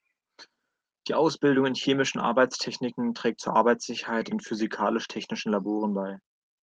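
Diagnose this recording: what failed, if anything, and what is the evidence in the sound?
Nothing failed; this speech came through intact.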